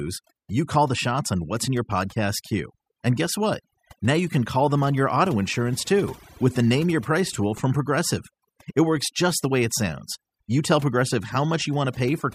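Overdone noise removal runs through the whole speech clip. A noise reduction stage was pushed too hard, cutting frequency bands that sit near its noise estimate. The background drops and breaks up into twinkling specks. Quiet parts of the voice vanish too.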